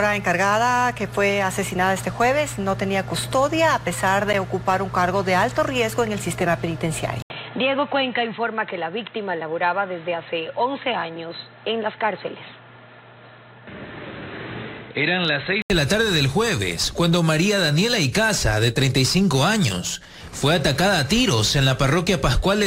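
After an 80 ms silence at 7.22 s, the sound turns dull and boxy until 15.7 s. Nothing above 4.1 kHz remains, the level sits a few decibels lower, and a new background noise appears well below the signal. The likely cause is the input switched to a poorer device.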